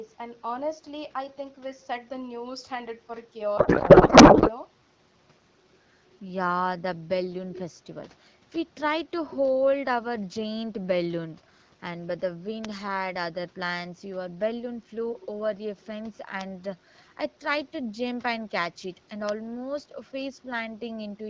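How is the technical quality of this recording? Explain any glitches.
The recording has two kinds of fault: one garbled stretch near the start and four isolated clicks later on. The speech itself comes through the clarity of a wideband call codec, consistent with AMR-WB at around 12.65 kbit/s.

From 3.57 to 4.50 s there is a codec payload misread. Octet-aligned AMR frames were decoded as bandwidth-efficient, so every field sits in the wrong place. The speech turns into warbling noise that barely tracks it. On a spectrogram the harmonic structure dissolves into smeared energy.

Bit error spikes occur at 9.45, 12.65, 16.41 and 19.29 s. Each is a single flipped bit, lasting one sample, or three at 12.65 s, and jumping by a power of two. Each is heard as a sharp tick. A waveform shows a lone vertical spike, and a spectrogram shows a thin full-height line.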